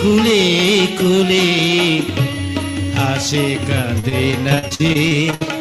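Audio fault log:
3.99–5.43 s, repeated packet loss (robotic sound): over this last stretch the stream keeps dropping out, with about a dozen short holes, the longest around 61 ms. Each one gets papered over by stretching the sound just before it, so roughly a quarter of that span is concealment rather than real audio. Because the patches come so close together, you get that choppy texture with bits missing.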